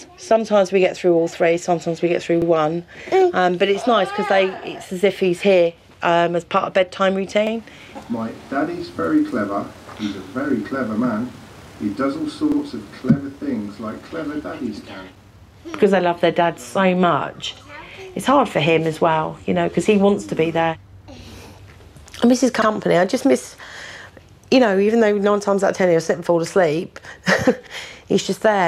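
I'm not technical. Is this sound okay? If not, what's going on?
No. Overlapping chunks at 2.42, 7.47, 12.52, 17.57, 22.62 and 27.67 s: the audio was handled in 5-second pieces that each begin slightly early, so a 50 ms sliver plays twice at every join, heard as a brief stutter every five seconds.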